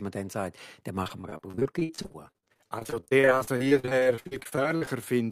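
From just after "dann sagt dann" at 1.03 s until 5.04 s, the stream suffers repeated packet loss (robotic sound): data keeps arriving lost or late, and dozens of holes, none longer than about 56 ms, are patched by extending the preceding sound, so roughly a third of that stretch is concealment. The speech turns choppy, with stuttering repeats and fragments dropping out in quick succession.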